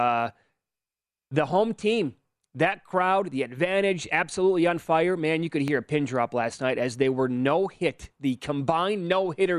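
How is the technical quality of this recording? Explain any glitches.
The recording has one glitch. At 5.68 to 5.70 s, between "you could" and "a pin drop last", a loud pop occurs. A sudden voltage pulse, likely from a plug, switch or static discharge, lands on the signal as a single sharp click roughly ten decibels above the speech, which continues underneath.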